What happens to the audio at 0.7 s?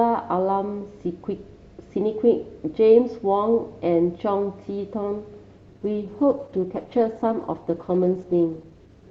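Nothing goes wrong at 0.7 s; the speech carries on intact through that moment with no dropout, click or distortion.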